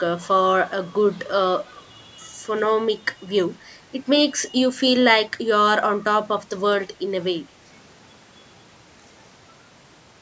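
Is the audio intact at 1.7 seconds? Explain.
No. A brief echo leak runs from 1.59 to 1.66 s: a faint copy of the speech returns about 208 ms late and roughly 15 dB down, likely from a loudspeaker echo canceller letting residue through.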